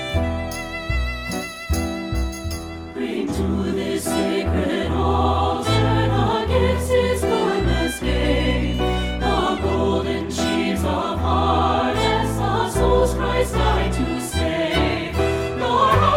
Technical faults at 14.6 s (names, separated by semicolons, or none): none